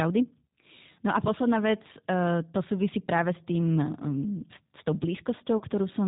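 Speech coded throughout with the G.729 codec: nothing above 4 kHz, plainly rough and synthetic buzz from pulse-based excitation, which fits 8 kbit/s and differs from the smeared, swirly artefacts of transform codecs. From 5.58 to 5.63 s, VoIP packet loss concealed by the speech codec stretches the sound into a fading buzzy tone or coloured noise, about 30 ms lost, fitting a single packet. That decaying synthetic fill separates it from a clean dropout or a hard click.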